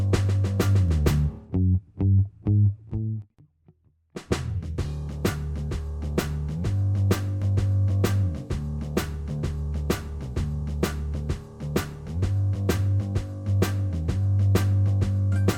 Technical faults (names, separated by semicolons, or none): none